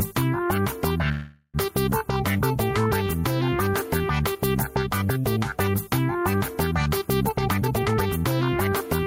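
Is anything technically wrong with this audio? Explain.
Yes, there are three faults in this recording of everyday sounds.

Gain pumping runs through the whole clip. The level swings by roughly 5 dB: the background swells up in the quiet gaps and then ducks each time a loud sound arrives. The likely cause is input gain set far too high, with a fast limiter pulling it back on every peak. That squashes loud and soft parts together. Unlike a plain level drift, the movement is tied to each loud event and recovers in every pause.

A call audio freeze occupies 1.11 to 1.57 s. The sound stops moving forward and the last moment is smeared into a fading buzz for about 424 ms, followed by roughly 40 ms of silence, and then the audio carries on exactly where it left off. That pattern likely comes from delayed packets leaving the jitter buffer empty. Nothing is skipped, which separates it from a dropout: a gap has been inserted, and everything after it runs about 424 ms late.

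A jitter buffer speed-up runs from 7.27 to 8.24 s. The buffer held more audio than its target, so the receiver trimmed many short, pitch-period-sized slices to catch up, removing around 0.3 s in total. The passage plays at about 134% speed and sounds hurried. Pitch stays the same, which distinguishes it from a simple faster playback rate.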